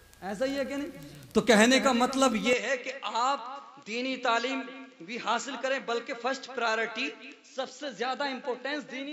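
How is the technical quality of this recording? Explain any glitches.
One glitch degrades the recording from 2.53 s onward. Input switched to a poorer device at 2.53 s, likely: its narrower band stops at 7.5 kHz, so the sound turns duller, slightly quieter and faintly noisier, with no gap.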